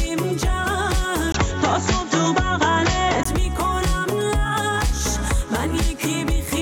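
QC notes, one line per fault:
1.32–3.25 s, likely input switched to a poorer device: 20 ms gap, dull band capped at 7.6 kHz, spectrogram shows flat ceiling, faint new noise.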